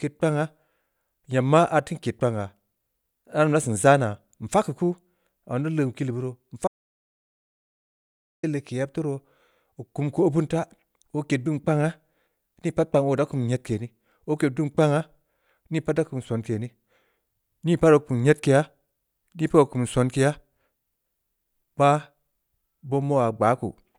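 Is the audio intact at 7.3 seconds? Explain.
No. At 7.3 seconds you're sitting right inside an audio dropout to silence that runs from about 6.68 to 8.43 s, so roughly 1.76 s of the speech is simply gone. The sound cuts off mid-flow into silence, with no room tone at all, then comes back in on "leg keu yeb taa". That's likely the input being lost for a moment while the recorder kept writing silence.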